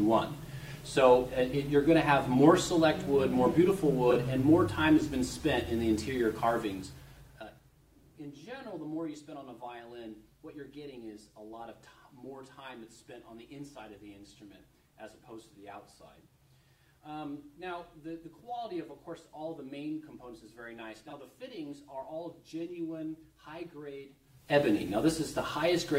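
At 4.10 s, 21.07 s and 25.49 s, frames out of order: two adjacent 23 ms frames swap places, giving a brief garbled flutter with no lost time, unlike a dropout. From 24.22 to 24.61 s, zipper noise: a change of about 20 dB moves in unsmoothed 2 dB steps, roughly 30 per second, so the ticking follows the level change rather than landing as isolated clicks.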